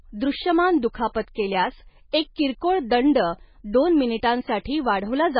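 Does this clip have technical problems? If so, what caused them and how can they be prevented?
Yes. The speech sounds watery and swirly throughout, with nothing above 5 kHz and heavy damage, which fits MP3 compression at a very low bitrate, around 16 kbps. The likely cause is an encoder starved of bits: it cuts the treble at a fixed point and drops weak frequency lines that flicker between frames. Encoding at a higher bitrate, or keeping the original uncompressed file, prevents this.

At 2.12 s, a brief hiss of about 16 ms precedes an attack just before "एक किरकोळ दंड दोन", and the attack sounds softened. This is pre-echo: the codec spreads quantisation noise across the whole block, so noise meant for the loud onset spills into the quiet moment before it. A higher bitrate, or an encoder that switches to short blocks on sharp attacks, prevents it.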